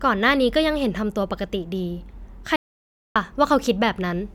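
At 2.56 s the speech halts abruptly and stays silent until 3.16 s, a playback stall of about 600 ms, likely caused by the player running short of data or its thread being blocked. The waveform drops to a flat line and the spectrogram shows a clean blank band across all frequencies.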